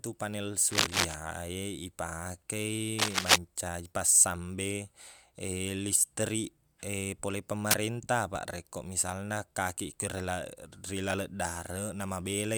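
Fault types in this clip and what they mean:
Cable scratch noise: at 0.71 to 1.14 s, 2.98 to 3.36 s and 7.71 to 7.87 s, dense, ragged bursts of scratching sit over the speech, around 5 dB louder than it, likely from a worn lead or connector being moved so its contact resistance jumps rapidly.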